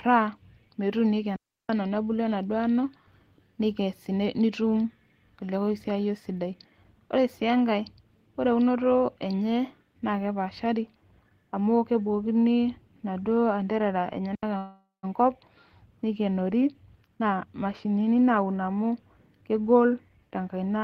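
At 1.36 s there's a digital wireless dropout: the radio link lost too much data and the receiver muted for about 333 ms, a clean near-silent hole with no noise burst, ending right before "ano nebulu". A shorter one, about 79 ms, hits at 14.35 s just after "amu kebukokini inaduoo anterara".

From 14.57 to 15.05 s comes a call audio freeze. The last sound is stretched into a fading buzz or hiss, then about 160 ms of silence, before the audio resumes where it left off. That's likely a jitter buffer running dry while packets were delayed, so about 456 ms of gap gets inserted without losing anything.

Then the receiver works off extra buffered delay with a jitter buffer speed-up. It trims tiny pitch-period slices so the speech runs at about 122% from 17.08 to 18.92 s, cutting roughly 0.4 s. A milder 109% speed-up follows from 19.42 to 19.76 s. Pitch stays put, but it sounds hurried.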